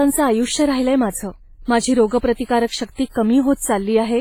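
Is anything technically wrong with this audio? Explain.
Yes. Throughout the speech there's a ringing, washy smear and a hiss that breathes with the voice. This is likely heavy WMA compression, whose long transform blocks spread quantisation noise, which fits a bitrate around 24 kbps.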